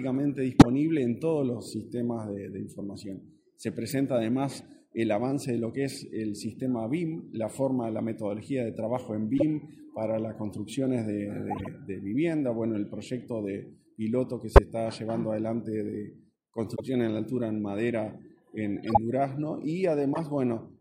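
Eight corrupt frames decoded: 0.54–0.66, 3.89–3.93, 9.38–9.43, 11.50–11.68, 14.52–14.59, 16.75–16.81, 18.84–18.97 and 20.14–20.20 s. Damaged bits in a few consecutive compressed frames were decoded anyway, spraying energy at wrong frequencies as short chirps and noise bursts, loudest near 0.54 and 14.52 s at about −5 dBFS. Unlike a dropout or concealed packet loss, nothing repeats. Foreign sound appears instead.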